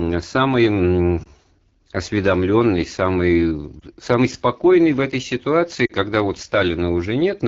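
Throughout, the speech passes through the AMR wideband (HD Voice) codec at a low mode, which fits 8.85 kbit/s. At this rate the pulse-driven vocal tract model can't track the voice closely, so it sounds plainly rough and raspy, with a noise-filled top band.

Lost AMR speech frames follow. The decoder patches each gap by repeating the last good settings at falling gain. At 1.23 to 1.28 s and again at 3.80 to 3.84 s, a brief dip or warble points to one missing frame. At 5.86 to 5.92 s, a longer fade before recovery suggests two.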